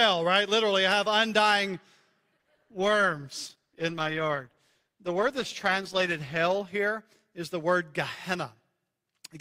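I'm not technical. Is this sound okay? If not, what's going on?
No. From 2.37 to 6.37 seconds there is an adaptive stream at a lower bitrate. The speech was being streamed, and the connection seems to have slowed, so the player switched to a lower-quality version of the audio to keep it going. For those four seconds the voice sounds more processed. It changes suddenly at both ends, with no pause or dropout.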